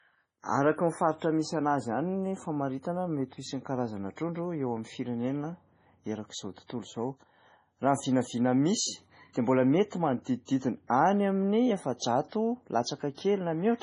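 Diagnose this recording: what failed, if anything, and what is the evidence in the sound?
The codec stage is the likely culprit. The speech has nothing above 10.5 kHz and sounds heavily damaged: watery and swirly, with smeared attacks. That points to MP3 compression at a very low bitrate, something like 24 kbps. The encoder chopped the treble and let weak detail flicker between frames.

There's pre-echo at 10.24 to 10.26 s, 10.45 to 10.48 s, and 13.15 to 13.18 s. A short hiss runs ahead of each attack for 24, 29 and 35 ms. The codec spread noise meant for the loud onset across its whole block, so it leaked into the quiet lead-in.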